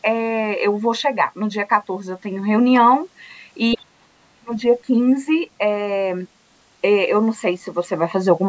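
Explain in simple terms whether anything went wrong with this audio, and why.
Two problems show up close together, just before the four-second mark.

At 3.72 to 3.77 s there is a brief burst of the other side's voice leaking through, fairly loud against the talker. The likely cause is the device's loudspeaker sound reaching the microphone, with the echo canceller failing to remove that short piece.

From 3.75 to 4.52 s the talker's speech is suppressed in double talk. For about 0.7 s it drops sharply, at its worst to near silence. The echo canceller likely heard both sides at once, could not tell them apart, and turned everything down.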